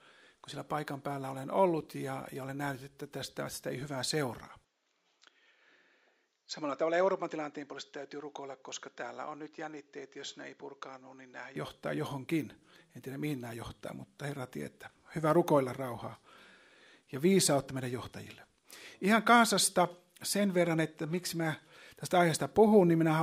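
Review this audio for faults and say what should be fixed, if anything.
From 4.65 s to 11.56 s the sound turns duller and slightly quieter, with nothing above 7.6 kHz, a level drop of around 5 dB and a faint new background hiss, then clears again with no gap at either edge. This is likely an input switched to a poorer device mid-recording. To prevent it, lock the recording input to the intended device and disable automatic device switching before recording.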